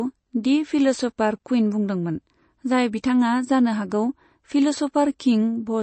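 Throughout the speech, the treble stops dead at 8.3 kHz and the sound has a watery, swirly quality with chirpy s sounds, likely from MP3 compression at a low bitrate near 32 kbps. A spectrogram shows a flat ceiling and flickering, patchy upper bands.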